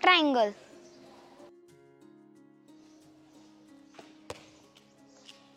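Damaged data in a compressed stream shows up twice, first from 1.58 to 1.63 s and again from 4.55 to 4.60 s, each lasting about 50 ms. In both places part of the encoded data is corrupt, so the decoder misreads those frames, loses its place and hunts for the next valid frame header before it can resume. Each time the result is a short, harsh chirp or blip cutting across the sound.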